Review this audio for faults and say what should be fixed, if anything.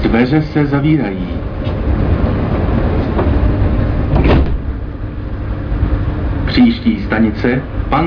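No technical faults can be heard anywhere in the clip. Nothing needs to be fixed.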